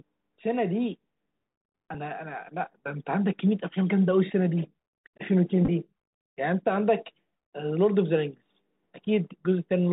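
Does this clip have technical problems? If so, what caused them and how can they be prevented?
Yes. The Bluetooth CVSD headset codec affects the whole speech clip. The audio is cut off above 4 kHz, s sounds turn scratchy, and a fine granular hiss sits under the speech. CVSD sends one bit per sample, which fits a 64 kbps headset link, and each bit only tells the decoder to step up or down. Loud, high-frequency sounds outrun that step size and distort. To prevent it, use a headset and phone that support wideband mSBC or LC3 voice, or record through a wired microphone.

Bluetooth headset packet repeats occur at 1.94 s and from 5.65 to 5.69 s. When a voice packet between headset and phone was lost, the chip decoded the previous packet's bits again. At 1.94 s a single repeat makes a small tick. At 5.65 s about 22.5 ms is lost, scattered over 30 ms, which points to several lost packets, with the longest run around 10 ms. 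Back-to-back repeats every 3.75 ms produce a brief buzz near 267 Hz. To prevent it, keep the headset close to the phone and away from Wi-Fi and other 2.4 GHz interference.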